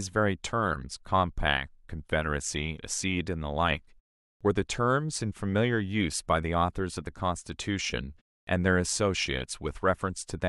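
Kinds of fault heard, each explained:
Clipped start after a pause: the output dozes off in silence and needs a moment to wake, so onsets get swallowed. Speech snaps in abruptly at 4.37 s, missing 36 ms after a 0.45 s gap, and at 8.43 s, missing 43 ms after 0.3 s.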